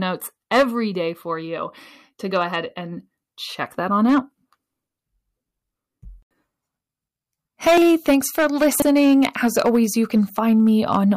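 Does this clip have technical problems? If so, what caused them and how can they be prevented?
Yes. Hard clipping occurs at 0.52 to 0.63 s, 3.62 to 4.18 s, 7.67 to 9.78 s and 10.15 s to the end. The speech peaks exceed what a stage in the chain can pass and are cut flat, adding high harmonics heard as harsh crackle and fuzz. The overload is about 4 to 6 dB in three stretches and about 11 dB in the longest. Lowering input gain or adding headroom before conversion prevents it.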